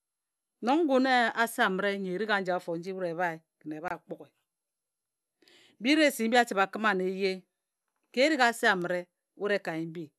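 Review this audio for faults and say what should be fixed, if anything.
Separately encoded pieces of the speech were joined without trimming each encoder's start-up delay and final-frame padding, leaving a gap at a join of encoded pieces: about 24 ms of silence from 3.88 to 3.91 s, with smeared edges, before the sound resumes where it stopped. To fix and prevent it, trim the encoder delay and padding from each piece before joining, or encode the whole recording in a single pass.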